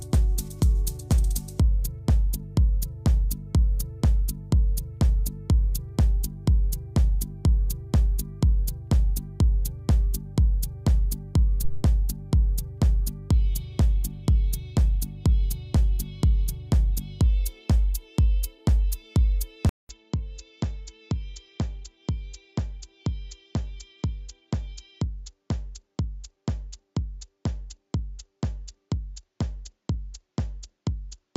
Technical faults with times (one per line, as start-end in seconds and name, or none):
11.64-11.83 phantom power thump
19.69-31.37 input switched to a poorer device